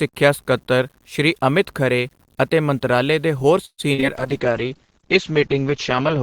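A speech clip with four kinds of fault. Throughout, there is grainy distortion that rises and falls with the speech. Quiet passages and word endings turn gritty instead of fading smoothly. The error sits roughly 40 dB below the signal. This is low bit depth without dither. The likely cause is truncation to about 9 bits. Without dither, the rounding error is tied to the waveform, so it sounds like distortion, not steady hiss.

Right after "ਅਤੇ ਮੰਤਰਾਲੇ ਦੇ ਹੋਰ", from 3.65 to 3.80 s, the sound stalls. The last sound carries on and fades, then drops to about 60 ms of silence. The speech then resumes from where it stopped. Nothing is lost, but everything after this point arrives about 128 ms late. This is a call audio freeze, likely from packets held up in transit until the jitter buffer ran dry.

Short concealed packet loss follows at 3.94 to 4.00 s and again at 4.00 to 4.04 s. About 40 ms and then 20 ms of real audio are missing. 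The receiver patched each hole by extending the previous sound and blending back. What you hear is a brief smear and wobble.

From 4.18 s to the end, the sound turns muffled and rough. Everything above 8 kHz is gone, where before it reached 20 kHz. The coding also becomes coarse and watery. It stays at this worst level for about 2 s and does not recover. This is a call bitrate drop, which fits the encoder falling from around 48 kbps to 8 kbps.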